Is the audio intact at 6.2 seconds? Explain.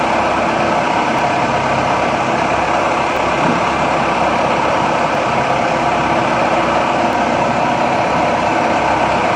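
Yes, the audio is intact at 6.2 seconds, with no fault present at that moment.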